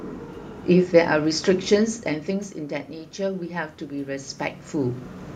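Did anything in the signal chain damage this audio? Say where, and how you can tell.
Yes. Automatic gain rising, call processing, 3.16–5.06 s. Voice and room noise swell together, about 3 dB, after input drops about 12 dB.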